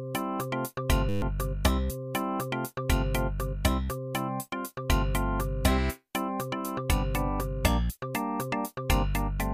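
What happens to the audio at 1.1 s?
At 1.09 s the audio locks into a system hang loop that lasts until 1.22 s. The playback path stalled while the sound hardware kept replaying the same ring buffer, so a single 10 ms slice repeats 13 times back to back. With a buffer that short, the repetition comes out as a steady buzz at 100 Hz rather than a stutter. Roughly 150 ms of the original audio never plays.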